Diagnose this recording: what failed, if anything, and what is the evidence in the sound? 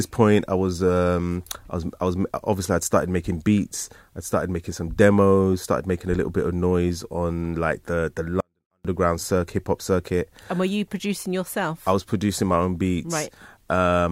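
A 24-bit alignment error in sample-format conversion: from 8.40 to 8.85 s, after "on like the the", the speech stays clean but drops about 48 dB, returning at "circuit hip hop circuit". The 24-bit samples sat in the low bytes of a 32-bit word and were read as full 32-bit integers.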